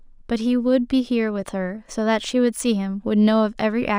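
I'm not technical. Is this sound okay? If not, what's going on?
No, there's crude rate conversion throughout: the speech was converted to a new sample rate, likely 32 kHz to 48 kHz, without smoothing, leaving a faint gritty fizz on louder, brighter sounds.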